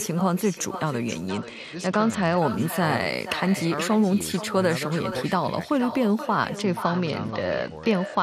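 Echo with no canceller runs from the start to the end of the clip. The far end is playing the call through a loudspeaker, and its microphone sends that sound straight back with nothing to remove it. Every phrase returns about half a second later as a copy roughly 12 dB below the speech. That copy is thinner than the original, so the talker seems to be trailed by a faint repeat of themselves.

A Bluetooth SBC bit pool drop hits from 1.29 to 2.38 s and again from 6.56 s to the end at 8.22 s. Both times, a congested wireless link forces the phone to cut the encoder's bit budget to keep audio flowing. The dulling points to a bit pool falling from about 28 to 10, near 84 kbps. The upper sub-bands are starved and the rest coarsely quantised, so the treble goes muffled and a gritty, granular noise rides on the speech until the rate recovers.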